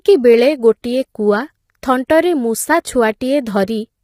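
Low-delay AAC compression runs throughout the speech: the voice sounds rough and grainy, with noise filling the gaps between pitch harmonics. This is likely AAC-ELD's short frames resolving harmonics poorly, and the heavy damage points to a low bitrate around 24 kbps.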